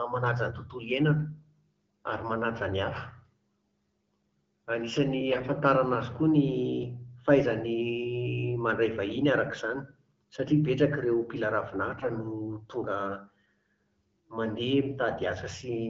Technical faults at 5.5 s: AMR bit errors

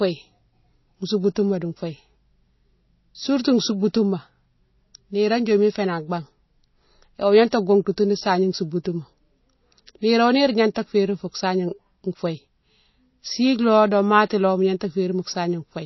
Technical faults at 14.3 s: MP3 compression

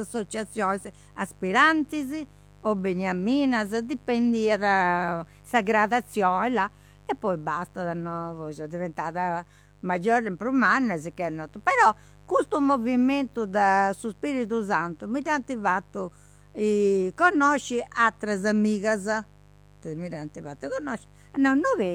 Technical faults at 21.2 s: mains buzz

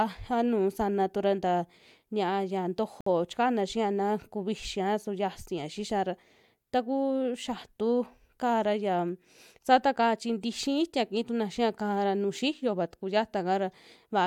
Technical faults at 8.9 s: none

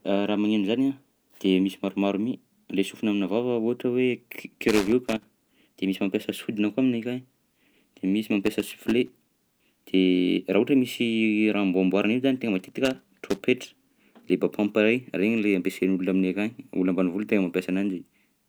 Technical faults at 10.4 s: none

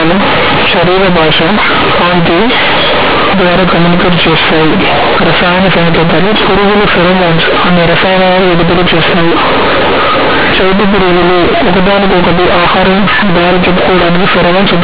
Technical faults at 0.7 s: companded audio read as linear

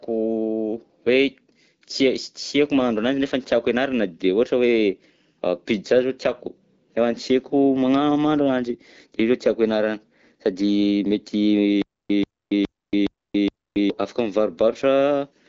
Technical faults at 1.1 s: none

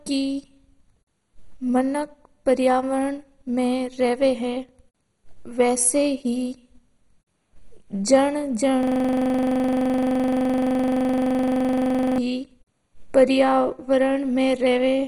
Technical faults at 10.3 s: MP2 compression; system hang loop

